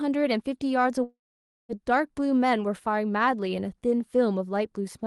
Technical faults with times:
1.03-1.72 long network dropout

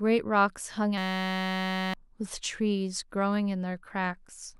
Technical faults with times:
0.98-1.94 system hang loop

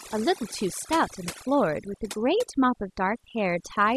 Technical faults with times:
0.00-3.96 overdone noise removal

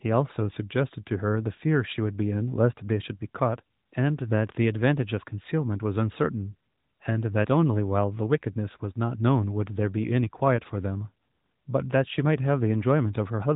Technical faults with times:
none

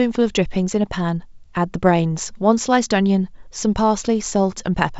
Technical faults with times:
none

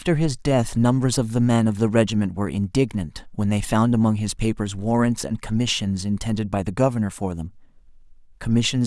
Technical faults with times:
none

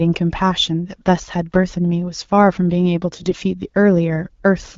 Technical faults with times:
3.13-3.37 AMR bit errors

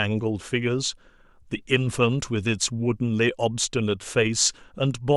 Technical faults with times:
none

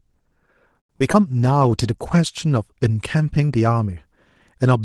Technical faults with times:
0.79-0.91 short stall from a late packet
0.99-1.15 short concealed packet loss
1.19-2.73 call bitrate drop

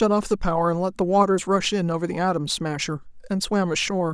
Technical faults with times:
none

